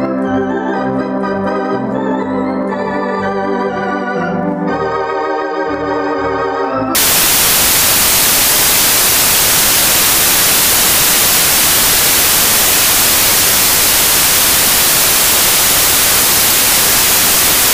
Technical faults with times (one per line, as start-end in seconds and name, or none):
6.95-17.73 samples built from the wrong bytes